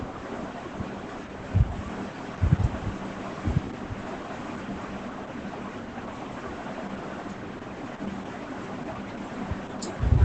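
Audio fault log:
Throughout: Opus voice compression. Nothing reaches above about 8.3 kHz, and the speech comes out heavily damaged: muffled, hoarse and faintly robotic, because the linear-prediction coder rebuilds the voice from a coarse excitation. The wideband cut-off together with this much roughness fits a SILK-mode stream near 10 kbps. A plain low-pass filter would narrow the band but leave the voice smooth. Here the grain sits inside the speech itself.
1.88–4.98 s: doubled audio track. A second full-band copy of the speech runs roughly a second behind the original, about 5 dB quieter. It has no decay and no room colour, and it switches in and out abruptly at those edges. That sets it apart from echo or reverb, which would fade away and colour the tone. The cause is likely a second, slower capture path or an edit that left two copies out of step.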